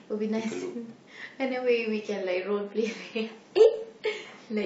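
At 2.06 s the speech switches abruptly, with no gap, to an adaptive stream at a lower bitrate that runs to the end. Codec artefacts rise, which fits a drop from 96 kbit/s to 24 kbit/s AAC after the connection slowed.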